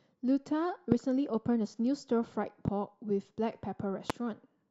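Speech with three loud pops, at 0.92 to 0.94 s, 2.68 to 2.70 s and 4.10 to 4.12 s. Each is a single sharp burst, about 20, 15 and 20 dB above the speech. The speech continues underneath. The likely cause is a voltage spike from a plug, switch, static or driver glitch.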